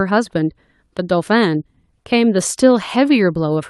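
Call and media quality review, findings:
No audible faults found.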